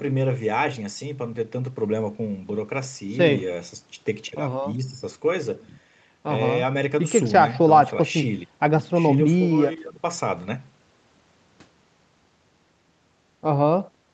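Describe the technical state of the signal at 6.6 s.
At 6.6 s the speech is intact, with no fault at that moment, only the call path's normal band limit leaving nothing above 8 kHz.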